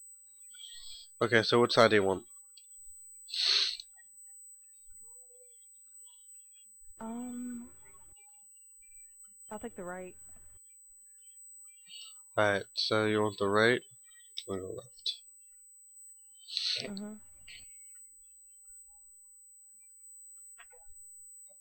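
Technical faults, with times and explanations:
Throughout, USB whine: current drawn by the USB bus in 125 microsecond microframes leaks into the audio through the power or ground, adding a steady, fixed-pitch whine at 8 kHz that sits around 25 dB below the sound and never moves in pitch.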